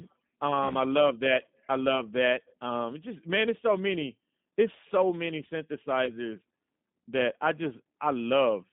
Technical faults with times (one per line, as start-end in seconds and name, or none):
0.00-8.72 G.729 codec
0.68-0.73 VoIP packet loss concealed by the speech codec
6.05-6.19 VoIP packet loss concealed by the speech codec